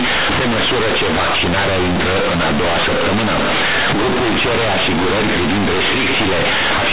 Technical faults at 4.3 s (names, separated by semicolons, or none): companded audio read as linear